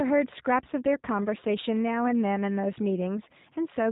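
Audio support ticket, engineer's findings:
G.729 codec damage across the whole clip, plainly audible: rough, slightly synthetic speech, nothing above 3.8 kHz. Probable component is the VoIP leg, which fits an 8 kbit/s G.729A link. It rebuilds speech from a vocal tract model plus sparse pulses.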